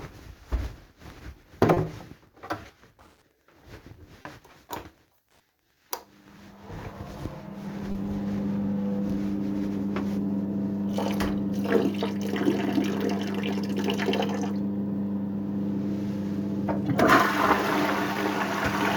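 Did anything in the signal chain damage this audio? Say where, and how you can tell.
Yes. Clock drift between sender and receiver at the network stage: the sender's clock runs about 1.5 percent slow, so small, unevenly spaced timing hiccups recur throughout the clip.

Short stalls from a late packet in the jitter buffer at 1.74, 4.22, 7.92 and 18.13 s. Each time the buffer ran empty, the receiver held the last sound for 30 ms (20 ms at 18.13 s) and then resumed with nothing lost.

Repeated timing corrections in the receive buffer from 7.68 to 16.66 s. Small repeated pieces slow playback to 99 percent and add around 150 ms in total.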